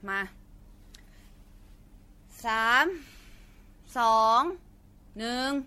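The speech has likely passed through repeated lossy MP3 coding, decoded and re-encoded something like half a dozen times or more at a low rate that fits 64 kbit/s. This generation loss runs throughout the clip. Each pass re-quantised the signal on a shifted frame grid, so the coding noise and spectral gaps have piled up. The result sounds swirly and hollow, consonant attacks are smeared, and nothing remains above 16.5 kHz.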